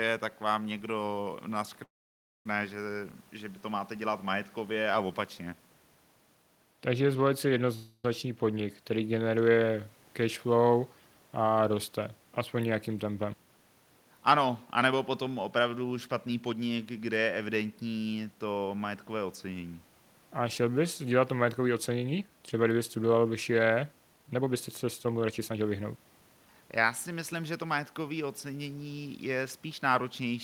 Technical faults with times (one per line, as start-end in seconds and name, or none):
1.83-2.46 call audio freeze
7.75-8.05 call audio freeze
14.72-17.19 jitter buffer speed-up
21.58-22.29 jitter buffer speed-up
24.14-27.33 jitter buffer speed-up